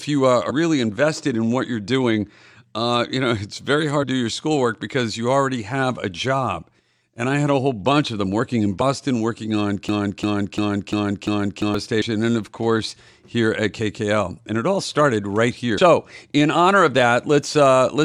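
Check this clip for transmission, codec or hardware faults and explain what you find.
The speech clip has two kinds of fault: five short bursts of damaged data in a compressed stream, and one broken-record loop.

The damaged-data bursts occur at 0.49–0.51 s, 4.02–4.04 s, 8.80 s (between "of them working in" and "working on"), 12.01 s (just before "and of course") and 15.77 s (just after "it all started right"). Each is a brief chirp or blip lasting about 25 ms or less. Corrupt bytes throw the decoder out of sync, so it outputs garbage until it locks onto the next valid frame header. On a spectrogram, each appears as a thin vertical smear of broadband energy that breaks the speech harmonics. The waveform shows a short jagged spike or a tiny discontinuity.

The broken-record loop runs from 9.89 to 11.75 s. A fragment of about 346 ms plays back to back, repeating five times, and the speech that should have filled those seconds is lost. 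The likely cause is a player, encoder or stream that stalled and kept resending its last buffered piece. On a spectrogram, the same block of harmonic pattern repeats like tiles at regular 346 ms intervals. The waveform shows identical envelopes stacked in sequence.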